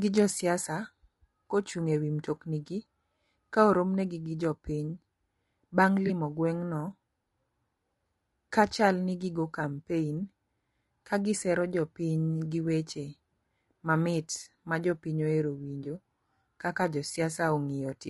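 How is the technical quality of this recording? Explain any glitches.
The recording has plainly audible codec damage across the whole clip, plus two brief dropouts.

Low-delay AAC compression, likely AAC-ELD as used in video calls, runs throughout. Its very short frames resolve the harmonics of the voice poorly, and at a rate that points to roughly 32 kbps there are too few bits to fill the gaps. The speech sounds rough and grainy, with noise between the harmonics and a thin, synthetic-sounding top band.

AAC frame loss with concealment occurs twice, from 6.07 to 6.11 s and from 15.83 to 15.86 s. Each gap is consistent with a single lost frame of about 20 ms. The decoder filled the hole by rebuilding the missing frame from the last good spectrum. Because the loss is so short, nothing fades to silence. Each spot is a quick smeared, noisy or phasey blip in the speech.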